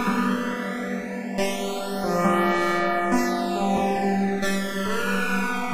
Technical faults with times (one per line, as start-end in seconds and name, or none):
0.00-5.74 channels drifting apart